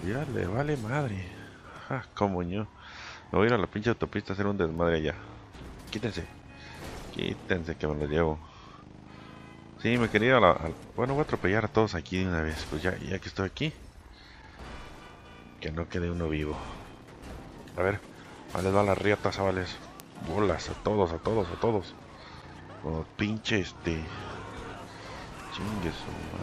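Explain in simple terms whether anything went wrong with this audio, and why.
Two ticks occur, at 4.78 s and 20.00 s, the second louder. Each is a bit error spike: one sample's value briefly jumped, then snapped back.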